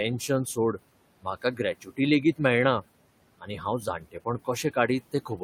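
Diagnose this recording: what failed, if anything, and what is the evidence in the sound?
The call-processing stage is where it goes wrong. The noise suppressor is pulling the room noise down by about 18 dB, so the background ducks in the gaps and swells back under the speech. The room noise itself sits about 19 dB below speech.

That same noise suppressor is also cutting speech. At 1.81–1.99 s, 3.82–4.26 s and 5.12–5.41 s, quiet bits get mistaken for noise and dropped by up to about 13 dB, roughly 0.1 s, 0.15 s and 0.1 s respectively, so they sound swallowed.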